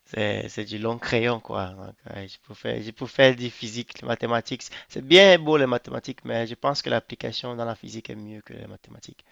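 Nothing goes wrong anywhere in this bit of speech, so there's no fault to point to at any moment.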